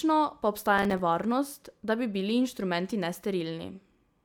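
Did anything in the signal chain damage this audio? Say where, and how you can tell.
Yes. At the driver or buffer stage, the processor missed a run of roughly ten audio deadlines from 0.78 to 1.00 s, which fits buffers of about 3 ms. Each miss dropped in a short silent gap with hard edges, heard together as processor overload crackle riding on the speech.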